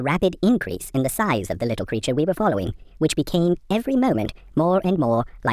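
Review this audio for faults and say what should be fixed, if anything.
The speech runs fast and high-pitched from start to finish, a wrong sample rate fault. Samples are reproduced faster than they were captured, with no resampling, so tempo and pitch rise together. Everything plays about 1.45 times too fast and sits roughly 6.45 semitones sharp, which fits audio captured at 22 kHz being played back at 32 kHz. To prevent this, carry the true sample rate in the file header and resample explicitly whenever the playback rate differs.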